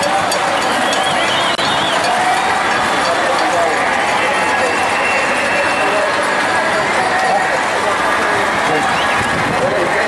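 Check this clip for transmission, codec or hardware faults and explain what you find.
One fault: a gap at a join of encoded pieces, from 1.55 to 1.58 s. Two separately encoded segments were butted together untrimmed, so encoder start delay and end padding leave a gap of about 29 ms with smeared edges. Unlike a dropout, nothing is lost: the sound resumes exactly where it stopped.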